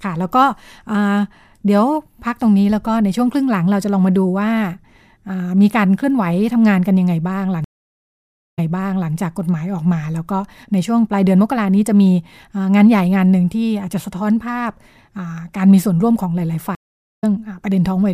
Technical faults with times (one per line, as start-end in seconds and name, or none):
7.64-9.12 stream reconnect
16.75-17.24 stream reconnect